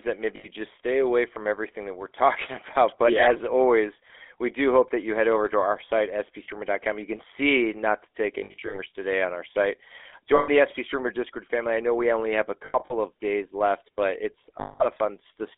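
The GSM full-rate codec runs through the whole speech clip. It rebuilds speech from a vocal-tract model excited by sparse regular pulses, which fits a 13 kbps coder. This gives a plainly audible buzzy, gravelly roughness, with nothing below 300 Hz or above 3.5 kHz.

Lost GSM frames occur at 0.36–0.47 s, 6.44–6.49 s after "over to our site", 8.38–8.79 s between "see not to take" and "today on our site", 10.36–10.5 s, 12.66–12.93 s between "we only have a" and "of days left but", and 14.6–14.86 s. The decoder holds the last good frame with falling level, producing a rough metallic ring. The two gaps before "today on our site" and "of days left but" are broken into short scattered dropouts of under a tenth of a second each.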